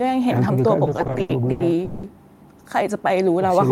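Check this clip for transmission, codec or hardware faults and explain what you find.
One fault: repeated stalls (stutter) between 0.85 and 2.05 s. Over that span the playback halts 13 times, with the longest halt about 190 ms, and roughly 460 ms, some 38% of the span, is filled in. Packets were reaching the receiver late or slower than real time, so its jitter buffer kept draining; each time it stretched the last sound, fading it during longer waits, then resumed. Nothing is lost, but the speech drags and stutters.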